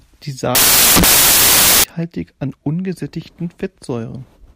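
A speech clip in which the section from 0.55 to 1.84 s collapses into loud noise, caused by samples built from the wrong bytes: the reader assembles each sample with its bytes misaligned or swapped, so the rapidly changing low bits land in the high-order position. Unlike added background hiss or clipping distortion, the noise is harsh and broadband.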